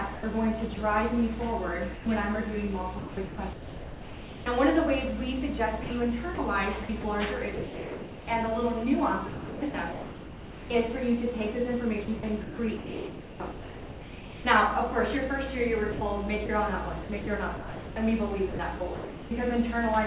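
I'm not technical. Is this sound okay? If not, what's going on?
No. The call system likely has a voice detector that decides, moment by moment, whether there's sound worth sending. It misjudged parts of this audio as background. For about 0.12 s starting at 1.94 s it stopped sending entirely, a case of sound dropped by the voice detector. The receiving end filled that gap with artificial background hiss, so the sound briefly gives way to steady noise and then returns.

More often, the same detector kept switching on and off within a stretch. This is sound chopped by the voice detector. It happens between 0.14 and 0.77 s, 2.99 and 4.46 s, 5.84 and 8.27 s, 9.29 and 10.7 s, 12.05 and 14.45 s, and 15.92 and 19.31 s. In each stretch, pieces of the sound are swapped for that synthetic hiss, from about 0.12 s up to about 1.8 s per stretch, so you hear holes. The call line itself carries nothing above 4 kHz.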